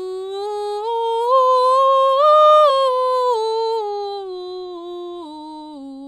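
At 2.69 to 2.71 s the music jumps forward, a case of compressed frames skipped. A run of encoded frames was never decoded, either missing from the stream or rejected as corrupt, so roughly a third of a second of music is simply absent. A gap of that size points to around ten frames lost. The music resumes further along than expected.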